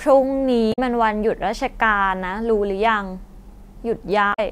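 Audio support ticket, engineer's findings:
Damaged data in a compressed stream: two brief glitches in the speech, 0.69–0.79 s and 4.30–4.39 s, each about 0.1 s. Corrupt bytes make the decoder misread frames and lose sync.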